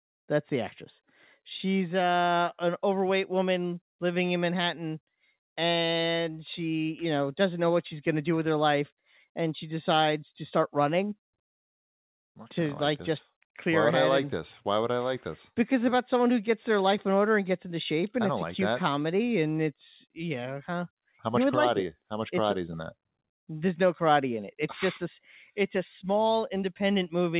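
No technical faults can be heard in the audio. It has passed through a normal call path with G.711 mu-law coding at 64 kbps, which leaves nothing above 4 kHz and gives it the narrow, telephone-band sound of an ordinary phone line.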